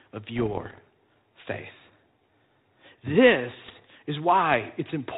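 Bit errors on an ADPCM link corrupt the coded stream from 0.36 to 0.82 s and again from 3.66 to 3.86 s, at a rate of under one percent. Each flipped bit throws off the decoder's step size and predictor, so the sound breaks into pops and rough, briefly louder or quieter bursts. The band-limited telephone sound fits G.726 at 32 kbit/s.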